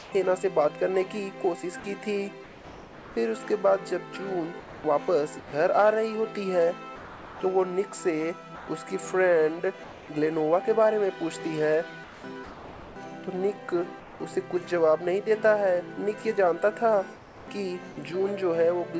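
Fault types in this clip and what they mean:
Sound chopped by the voice detector: From 0 to 14.2 s, about 3 s of quieter sound drops to synthetic fill, likely from a voice detector repeatedly switching transmission off and on.
Comfort noise in place of the background: From 17.16 to 17.48 s, the real background gives way to flat, featureless noise about 5 dB quieter, likely discontinuous-transmission comfort noise.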